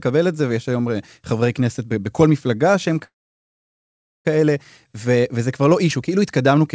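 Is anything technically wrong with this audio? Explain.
Yes. From 3.04 to 4.27 s the speech stalls: a short fading buzz carries the last sound on, then about 1.15 s of silence follows before the speech picks up exactly where it broke off, with nothing skipped. This is a call audio freeze, likely caused by packets held up in transit so the jitter buffer ran dry. The receiver filled the 1.21 s wait rather than dropping audio, leaving the rest of the clip 1.21 s later than it should be.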